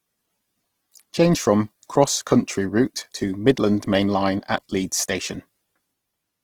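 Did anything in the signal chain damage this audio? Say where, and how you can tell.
Yes, at the codec stage. Throughout, the speech sounds rough and grainy, the mark of Opus compression in CELT mode, likely at a low rate near 16 kbps. A spectrogram shows bands filled with smeared noise instead of holes, with content still reaching 20.3 kHz.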